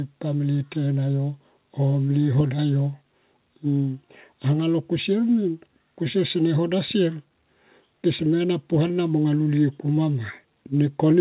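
No technical faults can be heard in this speech. It arrives over a call path that is working normally, with nothing above 4 kHz, which fits a narrowband G.711 A-law link.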